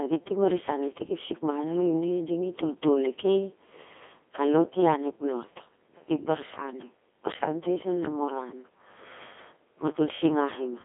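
Codec 2 vocoder damage runs throughout this speech: sine-wave resynthesis from pitch and envelope makes it robotic and buzzy, fitting roughly 2.4 kbit/s, banded 250 Hz–3.5 kHz, nothing above 3.7 kHz.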